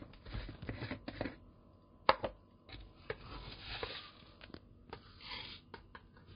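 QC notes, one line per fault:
Throughout, transcoding between lossy codecs: the audio is dull, with nothing above 5 kHz, and two kinds of coding artefacts are heard at once. The likely cause is a chain of two low-bitrate codecs, an MP3 stage followed by Vorbis. Both artefacts fit rates near 30 kbit/s. The second encoder spent its scarce bits re-coding the first one's damage and added its own, while the low cut-off survived the chain.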